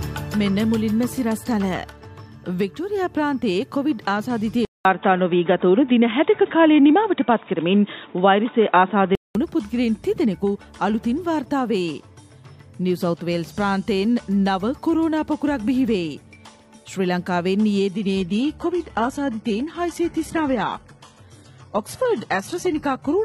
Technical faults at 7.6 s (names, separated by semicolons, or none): input switched to a poorer device